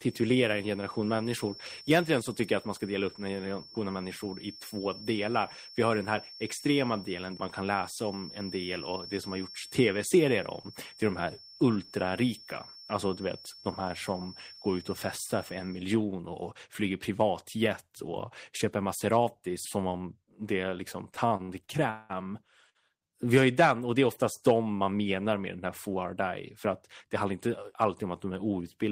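A feedback whistle runs from the start to 15.88 s: a thin, steady tone at 5.4 kHz sitting around 20 dB below the speech and slowly swelling and fading in level. The likely cause is sound from a loudspeaker leaking back into the microphone with loop gain just short of runaway. That single frequency keeps recirculating without building into a howl, then stops at 15.88 s.

Repeated stalls (stutter) affect the stretch from 20.97 to 22.12 s. Audio arrived late or too slowly for playback, so the jitter buffer emptied seven times within about a second. Each time the receiver extended the last sound to cover the wait. The fill adds up to 361 ms, about a third of that span, and the longest single hold is 192 ms. Nothing is lost, but the speech drags and stutters.

A short stall from a late packet follows at 22.70 to 22.77 s. One packet was not there when it was due, and the delay jumped by 54 ms, so the buffer briefly ran dry. 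The receiver stretched the preceding sound for 54 ms until the packet arrived, then resumed from where it had stopped. Nothing is missing, but one sound is held too long.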